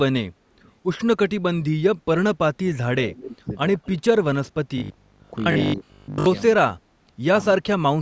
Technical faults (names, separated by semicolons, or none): echo leak; speech suppressed in double talk; robotic sound from repeated short buffers